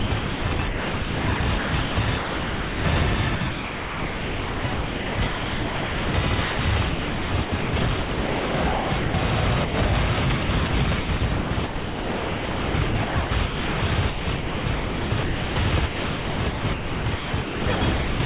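Sound chopped by the voice detector runs from 0.00 to 2.84 s, 3.35 to 9.14 s and 10.43 to 18.20 s: quieter parts keep cutting to synthetic comfort noise, about 2, 4.3 and 5 s in total, so the audio stutters, likely because a sender's voice detector kept toggling transmission. Sound dropped by the voice detector at 9.65 to 9.74 s leaves a 90 ms gap filled by steady noise, again likely from the detector treating real sound as background. Throughout, the narrowband call path leaves nothing above 4 kHz, which fits a G.711-type codec.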